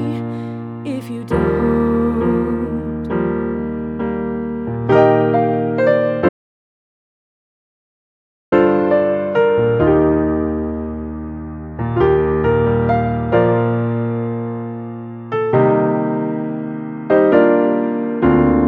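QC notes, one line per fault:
6.29–8.52 s, audio dropout to silence: the sound cuts off abruptly and returns mid-flow after about 2.23 s of silence with no room tone underneath, likely from the input signal being lost while recording continued; whatever occurred during that gap is unrecoverable.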